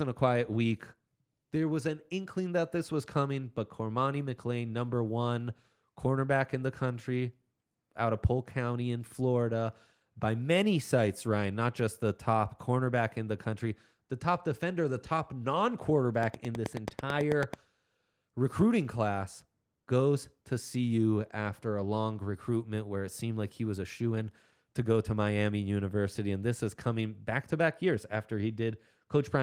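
Just after "defender the top non", from 16.23 to 17.55 s, a train of clicks ticks over the speech at a steady 9.2 per second: about fifteen near-identical pulses, roughly 15 dB above the signal, likely from electrical interference. The waveform shows evenly spaced spikes, and the spectrogram shows thin broadband vertical lines.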